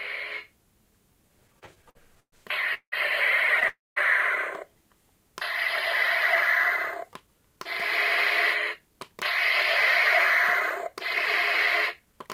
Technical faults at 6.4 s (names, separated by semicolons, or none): none